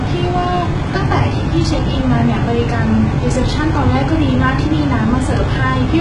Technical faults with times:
0.00-6.01 HE-AAC compression

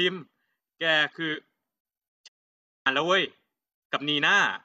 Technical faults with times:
2.27-2.87 digital broadcast dropout

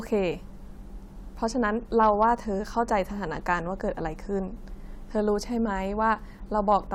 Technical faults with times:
2.00-2.25 hard clipping

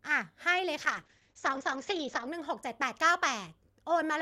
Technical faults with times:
0.78-2.33 call bitrate drop

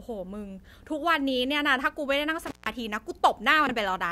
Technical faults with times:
2.43-2.70 intermittent contact
3.67-3.71 chunks out of order

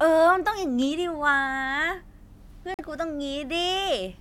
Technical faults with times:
2.74-2.81 Bluetooth dropout

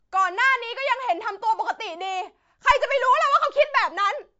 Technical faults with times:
0.00-4.40 MP3 compression

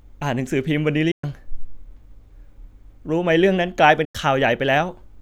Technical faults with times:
1.11-1.24 Bluetooth dropout
4.05-4.15 Bluetooth dropout

